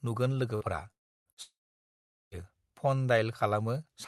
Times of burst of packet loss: 0.55-0.64, 1.31-1.40

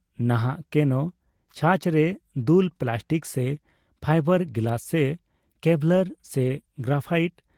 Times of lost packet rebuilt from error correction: 6.43-6.49

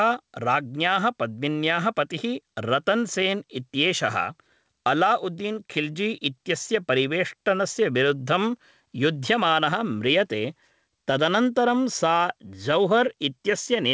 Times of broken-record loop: none

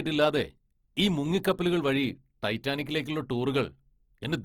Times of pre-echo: 1.43

